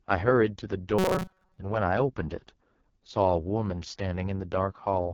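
AMR wideband (HD Voice) codec damage runs through the whole of this speech recording. The sound is rough and raspy, and nothing reaches above 7 kHz. That heavy roughness fits the codec's lowest 6.6 kbit/s mode, where the pulse-based vocal tract model is too coarse to rebuild the voice cleanly. A robotic sound from repeated short buffers appears from 0.99 to 1.59 s. The speech collapses into a rigid metallic buzz at 188 Hz that only loosely tracks the voice. The likely cause is that new audio arrived too late and a chunk of about 5.3 ms was replayed over and over, covering most of that span.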